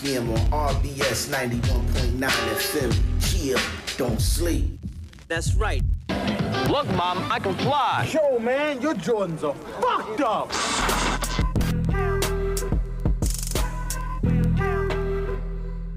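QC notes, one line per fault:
0.18–15.88 s, word clock ticks: around a hundred sharp ticks of uneven strength, roughly every 0.15 s, right through the audio. The receiving device's clock is drifting against the sender's by something like 150 ppm, so at each slip a single sample is dropped or repeated and a few are misread. Unlike random clicks or crackle, these ticks keep a steady rate, and unlike dropouts no stretch of audio goes missing.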